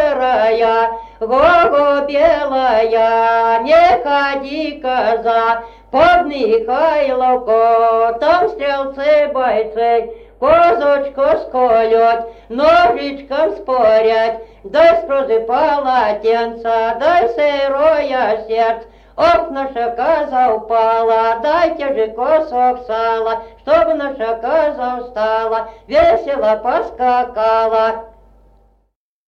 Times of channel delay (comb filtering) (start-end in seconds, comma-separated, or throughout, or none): 9.20-10.64